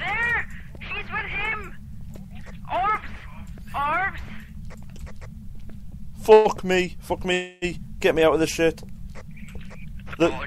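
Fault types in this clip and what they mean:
Call audio freeze: at 6.33 s and again at 7.33 s the sound stalls and the last fragment is carried on as a fading buzz, about 120 ms the first time and 288 ms the second, without dropping to silence. The audio then resumes exactly where it stopped, so nothing is lost, but each pause pushes everything after it later by its own length. The likely cause is delayed packets running the jitter buffer empty.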